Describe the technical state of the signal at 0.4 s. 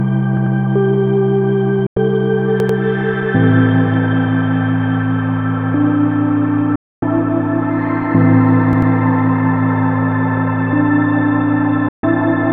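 At 0.4 s you're in the middle of a repeated buffer running from 0.37 to 0.56 s. Fresh audio didn't arrive in time, so a roughly 93 ms chunk, which fits a 4096-sample buffer, plays three times with hard joins, giving a short stutter. Next to nothing seems lost.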